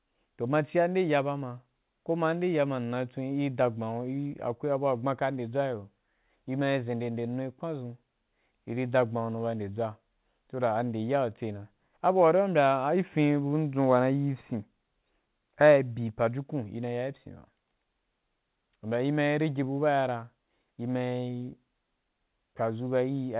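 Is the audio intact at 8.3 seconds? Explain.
Yes, at 8.3 seconds the speech is intact, carried cleanly through the call path, whose G.711 mu-law coding leaves nothing above 4 kHz.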